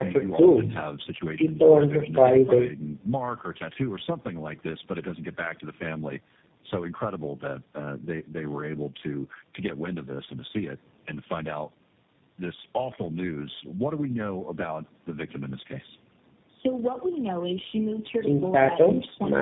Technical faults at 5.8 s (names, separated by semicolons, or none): tandem speech coding